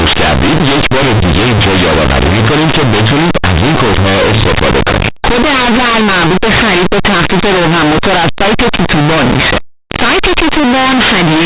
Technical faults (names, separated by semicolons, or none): linear audio read as companded